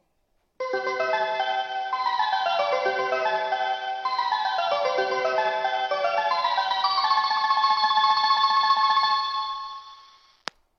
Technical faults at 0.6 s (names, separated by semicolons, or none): none